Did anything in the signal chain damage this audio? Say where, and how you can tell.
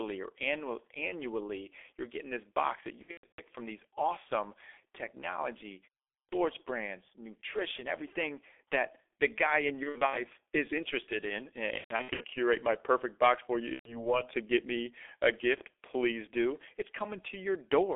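Yes. The codec stage did damage. The whole clip carries heavy G.723.1 codec artefacts. The speech is muffled and hoarse, and consonants blur. The band sits between 300 Hz and 3.5 kHz. The coarse, slow-updating sound fits a rate near 6.3 kbit/s.

The network stage added VoIP packet loss, concealed by the speech codec. It occurs at 3.02–3.43 s, 9.83–10.18 s, 11.78–12.25 s and 13.73–14.15 s. In each stretch the speech turns into a buzzy tone or coloured noise that fades. The decoder is extrapolating from its last frame. The gaps suggest bursts of lost 30 ms frames, some running to 120 ms.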